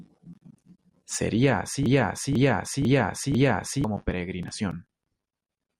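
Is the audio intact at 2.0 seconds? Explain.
No. At 2.0 seconds the speech is caught in a broken-record loop from 1.86 to 3.84 s: a 0.5 s fragment plays four times back to back, likely from a stalled player or stream resending its last buffer, and the speech meant for that span is lost. A spectrogram shows identical half-second blocks tiling side by side.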